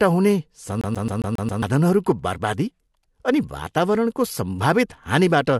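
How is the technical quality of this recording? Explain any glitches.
The recording has one clear glitch: a CD stuck on one turn. From 0.81 to 1.63 s, a scratch keeps knocking the laser back a track, so the same 135 ms slice of speech repeats six times, each separated by a brief mute. It sounds like a rapid, even stutter. A spectrogram shows identical blocks tiled every 135 ms with thin silent gaps between them.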